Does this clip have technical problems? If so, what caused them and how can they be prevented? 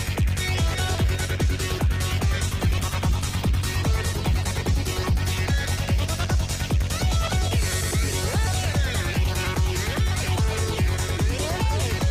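Yes: there is a call bitrate drop from 2.47 s to 7.09 s. The bandwidth estimate fell and the encoder was pushed to far fewer bits. The sound turns coarse and muffled, worst for about 2.04 s, which fits a fall from around 48 kbps to around 14 kbps. On a spectrogram, the upper band is cut away and the remaining detail looks blurred, then fills back in as the bitrate recovers. Keeping network headroom and setting a sensible minimum bitrate prevents this.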